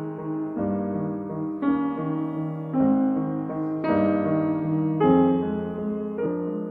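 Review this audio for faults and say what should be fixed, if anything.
Compressed frames skipped at 6.25 s: the music jumps ahead by roughly 150 ms, about seven 23.2 ms frames. To prevent it, re-encode from the original source or repair the damaged file so that every frame decodes.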